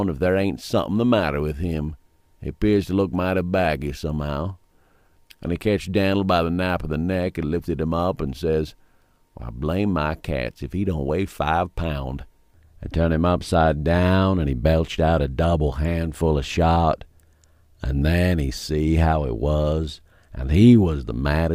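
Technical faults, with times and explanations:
Nothing in the audio points to a technical fault, so there's nothing here to flag.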